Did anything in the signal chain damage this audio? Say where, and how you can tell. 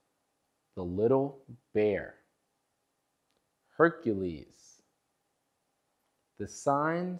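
No, nothing I can hear points to any stage of the chain having damaged this recording, so there's nothing to chase here.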